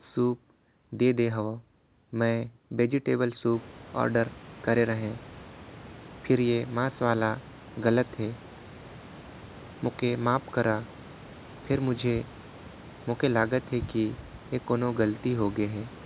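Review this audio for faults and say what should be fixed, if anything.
Nothing needs fixing. The speech goes through a call path whose sound stops at 4 kHz, consistent with narrowband telephone coding such as G.711, and the room's background noise rises by about 21 dB at roughly 3.5 s but stays about 22 dB below the speech.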